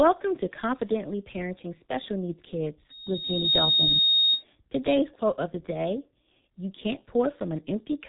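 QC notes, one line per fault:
throughout: G.723.1 codec, heavy damage. Nothing passes above 3.9 kHz, and the slowly updated voice model makes speech hoarse with blurred consonants, unlike a plain low-pass filter.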